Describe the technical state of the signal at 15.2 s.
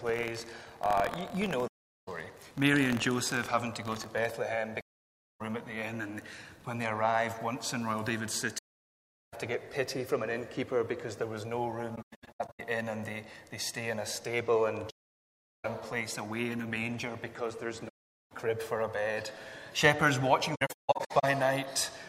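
At 15.2 s the sound drops out. This is AAC frame loss with muting, from 14.89 to 15.65 s. The decoder zeroed the missing frames, leaving a soft-edged silent gap.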